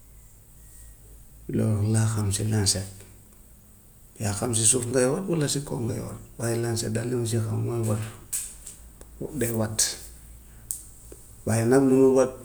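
No technical faults can be heard at any point in this speech recording.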